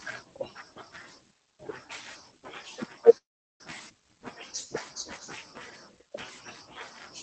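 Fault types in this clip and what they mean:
Call audio freeze: at 3.17 to 3.61 s the sound stalls for about 0.43 s, a brief continuation of the last sound giving way to near silence for about 0.38 s, then resuming where it stopped. Likely late packets emptying the jitter buffer, so nothing is lost, only delayed.
Skip ahead: at 3.89 s playback jumps forward with almost no gap, roughly 0.2 s of speech missing and the two sides joined nearly directly. A stretch of audio was dropped while later audio was already waiting.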